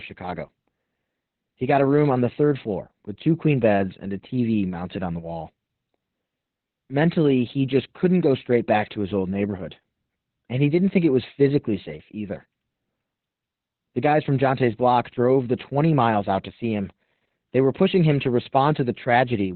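Opus voice compression runs throughout this speech clip, heavy enough to dominate its character from start to finish. The band stops at about 4.2 kHz, the narrowband limit the coder falls back to when starved of bits, and the linear-prediction excitation is coded so coarsely that the voice comes out muffled, hoarse and faintly robotic. That combination points to the SILK mode running at a very low rate, around 8 kbps.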